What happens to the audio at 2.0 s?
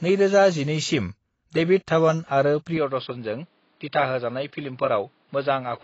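At 2.0 s, as throughout, the speech has nothing above 7.8 kHz and a plainly audible smeared, warbling texture, likely from AAC compression at a low bitrate that quantises the spectrum coarsely.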